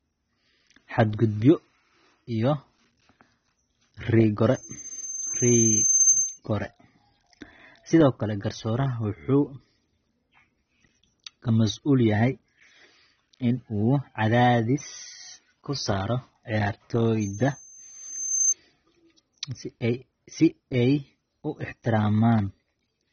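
From the very start the speech sounds dull and a bit smeared, with nothing at all above 6.5 kHz and a watery, fizzy edge on the sibilants. That's most likely AAC compression: the encoder is starved of bits, so it drops the top of the spectrum and coarsely quantises what's left. The damage is plainly audible and points to a low-bitrate AAC-LC stream, something around 24 kbps.

At 4.52 s a loudspeaker feedback squeal kicks in, a single tone at 6.3 kHz that swells over roughly a second until it sits about 10 dB above the speech, then cuts out at 6.39 s. It happens again from 17.21 to 18.54 s, same pitch and same build. The mic is picking up its own speaker, and at that one frequency the loop gain tops unity, so the tone keeps feeding itself.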